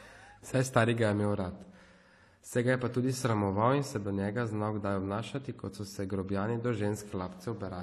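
Throughout the speech, layered codec artefacts are heard together, and a spectrogram shows nothing above 14 kHz: likely transcoding between lossy codecs, consistent with HE-AAC then AAC-LC.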